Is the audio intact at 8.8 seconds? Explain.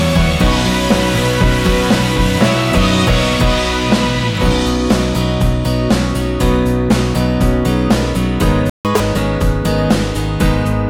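No. A playback stall runs from 8.70 to 8.85 s: the sound cuts out mid-flow for about 0.15 s, most likely because the player ran short of data. Catch-up at higher speed follows from 8.85 to 9.00 s, with the backlog resampled at double speed so that the pitch jumps roughly ten semitones before settling back.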